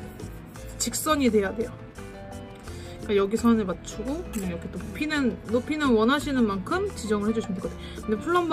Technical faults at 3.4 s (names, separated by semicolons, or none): none